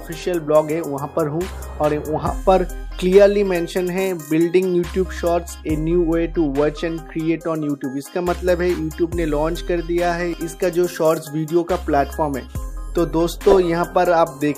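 From 5.79 s to 7.97 s the sound turns dull and muffled, the result of de-emphasis applied wrongly. A treble-cut curve intended to reverse pre-emphasis has been applied where no matching boost existed, or applied twice, so nothing offsets it. The response falls away smoothly above the midrange, reaching about 8 dB down at 10 kHz relative to 1 kHz. Brightness and detail in the upper range recede for that stretch, as though heard through a blanket.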